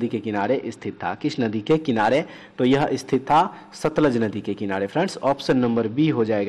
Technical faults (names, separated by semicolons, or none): Bluetooth SBC bit pool drop